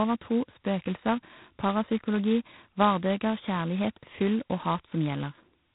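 Throughout the speech, G.726 ADPCM coding is running at a very low bit depth, heavy enough to fit its 16 kbit/s mode. Each sample's coarse prediction error becomes a harsh, rasping hiss that swells and fades with the speech, and nothing passes above 3.9 kHz.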